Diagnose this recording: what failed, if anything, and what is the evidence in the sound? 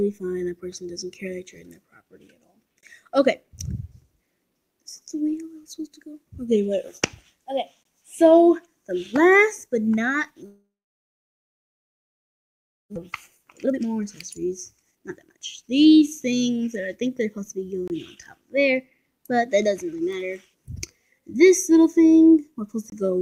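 Gap between chunks, at the playback or storage stage: hard-edged holes of about 23 ms at 2.81, 7.83, 17.88 and 22.90 s, spaced at multiples of 5 s. The audio was handled in 5-second chunks, and silence was inserted at each join. No sound is lost, but the flow breaks cleanly at each boundary.

Long network dropout, from 10.46 to 12.98 s: the last sound is stretched into a decaying fill that soon gives way to near-silence, and the audio resumes about 1.6 s further on. The likely cause is a network outage during which no packets arrived, so the receiver concealed the gap and then went quiet.

Jitter buffer speed-up, from 13.37 to 17.63 s: the sound runs about 19% fast at unchanged pitch and feels hurried. After the outage the buffer held around 0.7 s more than its target, so the receiver removed short pitch-period slices repeatedly to bring the latency back down.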